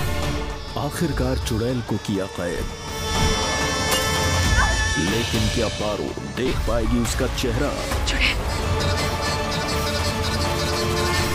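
At 6.48 to 6.51 s there is a repeated buffer. New audio arrived late, so the device replayed the last block it had, several times in a row. Each block lasts about 5.8 ms, which fits a 256-sample buffer. The hard joins make a brief buzz, and about 20 ms of real sound is lost. At 8.40 s the same fault happens once more. A single block repeats. It is heard as a short click, with a few milliseconds of sound missing.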